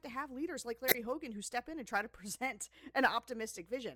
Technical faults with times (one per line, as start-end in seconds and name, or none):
0.88-0.95 corrupt frame decoded